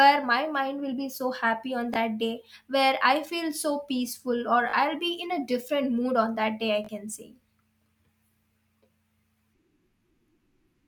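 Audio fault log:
1.94 to 1.96 s, Bluetooth stutter: just before "that day where", a single slice of about 19 ms is replayed, consistent with one late packet. This gives a brief repeat instead of a silent dropout.
4.70 to 4.73 s, Bluetooth stutter: about 37 ms is filled with repeats, which fits two packets lost in a row.
6.85 to 6.89 s, Bluetooth stutter: right after "on that day i", another 37 ms of repeats sounds like a short machine-gun rattle. Unlike a skip, the audio resumes later as though it had kept playing.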